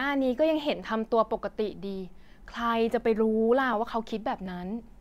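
Regular clicks every 0.73 s from 0.83 to 4.46 s, about seven in all, likely clock drift buffer slips: mismatched device clocks dropping or repeating a few dozen samples each time.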